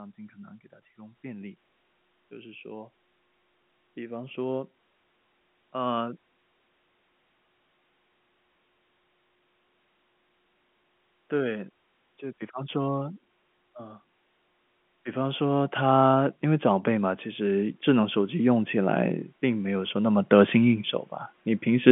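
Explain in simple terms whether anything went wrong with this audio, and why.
One thing goes wrong: from 15.12 to 20.89 s the automatic gain rises. The phone's level control judged the speech too quiet and slowly turned itself up, so the voice and the background swell together over several seconds. That shared, gradual swell is what tells it apart from someone simply moving closer to the microphone, which would make the voice louder but leave the background unchanged. Throughout, the sound stays within an ordinary telephone line's narrow range.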